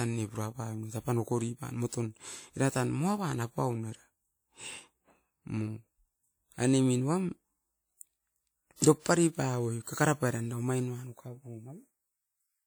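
At 8.76 s, pre-echo: a brief hiss runs about 39 ms ahead of a sharp speech onset, softening the attack, because codec quantisation noise spread backward across the transform block.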